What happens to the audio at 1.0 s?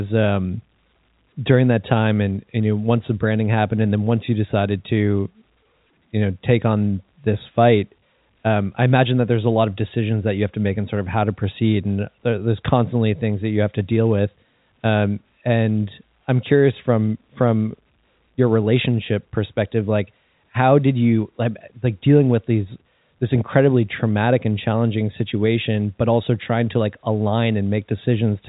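Nothing goes wrong at 1.0 s: the speech there carries on intact within its G.711 telephone band, which stops a little below 4 kHz.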